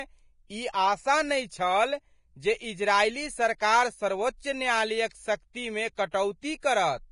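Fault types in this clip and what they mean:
Vorbis compression: Throughout the speech, nothing is heard above 10.6 kHz, and the treble is heavily damaged, with a hissy, grainy texture and roughened tones. This likely comes from Vorbis encoding at a low bitrate, which fits a rate of around 30 kbps. At that rate the encoder cuts the top band and quantises the remaining high frequencies so coarsely that fine detail becomes noise of similar energy, blurring consonant attacks.
pre-echo: At 0.72 s, 5.53 s, 6.11 to 6.14 s and 6.60 to 6.63 s, a brief hiss of about 17 to 27 ms comes just before a sharp onset, which then sounds softened and smeared. The codec spreads its quantisation noise across a whole transform block. When a sudden attack falls late in that block, noise sized for the loud part also fills the quiet moment ahead of it.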